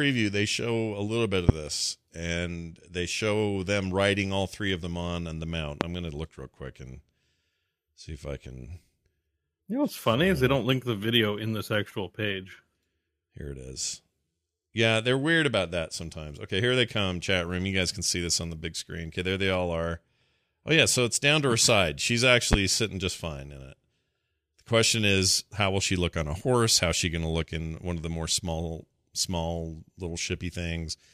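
Sharp single pops cut across the speech at 1.49–1.52 s, 5.81–5.84 s and 22.53–22.56 s, each lasting about 30 ms and standing roughly 20 dB above the speech, with the last one nearer 25 dB. The speech carries on beneath each one. These are loud pops, likely caused by a brief voltage spike, such as a switch, plug or static discharge, entering the signal chain and being shaped into a short pulse by the circuitry after it.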